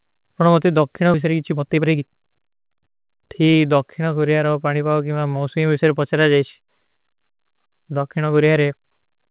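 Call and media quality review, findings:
Skip ahead, 1.14–1.16 s: playback jumps forward with no fill, about a second of speech missing. Jitter buffer overflow or loss discarded queued audio; the two sides are spliced almost directly.

Jitter buffer speed-up, 1.26–3.55 s: speech runs about 114% speed at unchanged pitch and sounds hurried. The receiver trimmed pitch-period slices, roughly 0.3 s in total, to drain the excess buffered delay.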